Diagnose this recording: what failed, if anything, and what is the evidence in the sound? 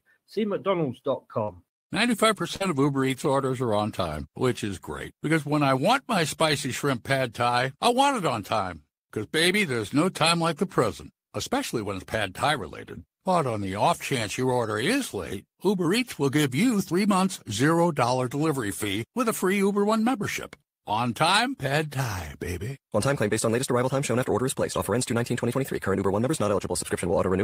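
At 2.56 to 2.62 s there is a brief smear where about 40 ms of speech is replaced by a stretched continuation of the preceding sound before the real signal fades back in. This is short concealed packet loss at the network stage. Audio arrived too late or not at all, so the receiving decoder extended the last pitch or noise shape to cover the hole.

From 2.60 to 3.14 s, running into "orders are on time", the speech turns rougher and grainier for about 280 ms with no gap. A single grainy instant also appears at 6.50 s, between "when I want my" and "shrimp pad thai I". Both are lost packets rebuilt from error correction. The network dropped the audio, and the decoder played the low-bitrate backup copies that the following packets carried. The longer stretch fits 14 separate lost 20 ms frames.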